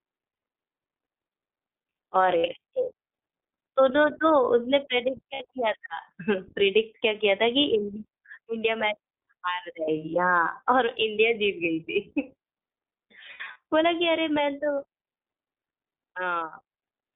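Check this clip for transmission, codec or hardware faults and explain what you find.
Two faults are audible. Throughout, the iLBC codec confines the speech to roughly 250 Hz–3.7 kHz and adds a plainly rough, synthetic edge. This points to 20 ms frames at about 15 kbps. Unlike wideband codecs, nothing reaches above 4 kHz.

There are lost iLBC frames at 5.34–5.42 s (60 ms) and 13.32–13.56 s (140 ms scattered over 240 ms, longest gap under a tenth of a second). The decoder repeats the last pitch cycle with noise, giving brief buzzy held vowels. Speech recovers instantly, unlike codecs that smear errors onward.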